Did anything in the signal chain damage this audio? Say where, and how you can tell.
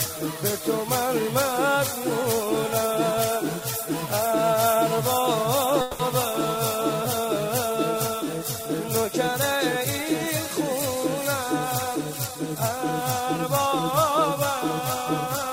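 Yes. A call audio freeze sits between 5.81 and 6.01 s. For about 180 ms the sound doesn't move on: the last moment is stretched into a fading buzz rather than dropping to silence. Then the audio resumes exactly where it stopped, with nothing skipped. That points to the network stage, most likely packets held up in transit while the jitter buffer ran dry, leaving the receiver to fill the gap and adding roughly 180 ms of delay.

Jitter buffer speed-up follows in two stretches, 11.93 to 13.22 s and 13.66 to 14.19 s. The sound runs at about 105% and then 108% of normal speed with its pitch unchanged, so it comes across as hurried. This is the receiver's buffer working off extra backlog by cutting out tiny pitch-period-length slices over and over, around 70 ms in the first stretch and roughly 50 ms in the second.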